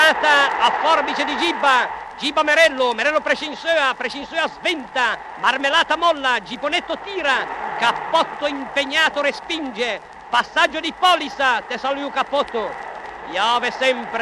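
No technical fault can be heard anywhere in the audio: the signal runs continuously without interruption, distortion or level problems.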